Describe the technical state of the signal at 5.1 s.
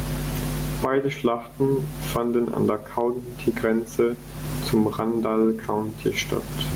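Gain pumping is present at 5.1 s, as throughout the clip: a fast limiter, likely chasing excessive input gain, swings level by around 25 dB, so loud and soft parts end up closer in level and the sound is squashed.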